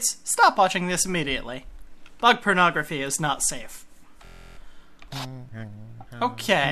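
At 4.25 s the sound locks into a system hang loop until 4.57 s. The computer or driver stalled, but the audio hardware kept replaying the same ring buffer. A 23.2 ms slice repeats 14 times, which fits a 1024-sample buffer. Because the slice is so short, it comes across as a steady buzz at about 43 Hz rather than a stutter. When the loop releases, the sound resumes with essentially nothing missing.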